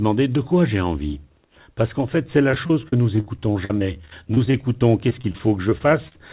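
From just after "qu'en fait c'est la", this speech clip turns choppy and robotic, with a stuttering quality, from 2.51 s to 6.16 s. This is repeated packet loss (robotic sound): over that stretch there are 32 separate holes, the longest about 45 ms, each patched by stretching out the sound just before it. About 15% of the span is concealed this way. The call-path band limit also removes everything above 4 kHz, which fits a narrowband G.711-style codec.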